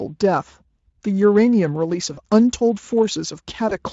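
At 2.13 to 2.19 s and 3.69 to 3.78 s, VoIP packet loss concealed by the speech codec occurs. Packets dropped, about 40 ms and then 20 ms. The decoder extrapolated, giving a brief buzzy or noisy, fading smear.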